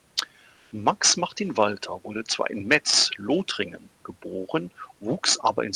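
Comfort noise in place of the background occurs from 0.55 to 0.67 s. For those 120 ms the room's textured background, about 40 dB below the loudest sound, becomes a smooth, featureless hiss that shifts by about 2 dB. The likely cause is discontinuous transmission of the Opus kind, with the receiver synthesising filler noise.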